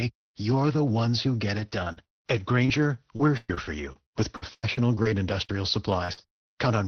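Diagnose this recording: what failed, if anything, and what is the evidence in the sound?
Repeated packet loss (robotic sound) on the network leg runs from 1.59 to 2.79 s, just after "the ones who get", and again from 3.17 to 6.48 s. Lost packets left 4, then 15, holes (longest 40 ms, then 113 ms), each patched by extending the last sound, giving choppy speech with pieces missing over the Opus call path.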